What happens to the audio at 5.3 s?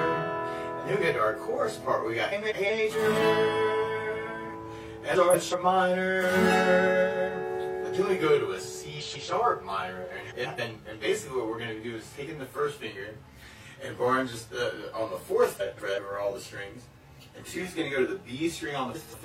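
Frames out of order: between 5.15 and 5.54 s, two adjacent 186 ms blocks were decoded swapped, producing a garbled flutter.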